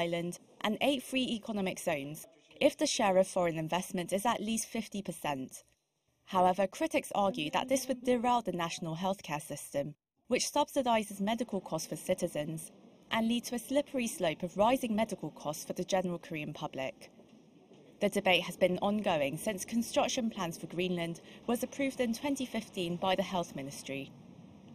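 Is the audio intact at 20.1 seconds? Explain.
No. At 20.1 seconds, one channel arrives a fraction of a millisecond late, around 0.3 ms, and the two are summed to mono, causing channel delay comb filtering. Shared content cancels at evenly spaced frequencies starting near 1.5 kHz, leaving the sound hollow and phasey with fixed notches.

The moment also falls inside a run of clock slip clicks spanning 0.17 s to 24.71 s. Two devices are likely running on unmatched clocks, drifting apart by roughly 150 parts per million, so a single sample slips roughly every 0.15 s. This is heard as faint, regular ticks.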